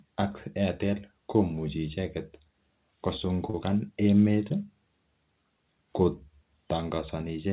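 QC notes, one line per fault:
3.50–3.56 s, short concealed packet loss: about 30 ms went missing and was filled by stretching the preceding sound, leaving a brief smear rather than silence.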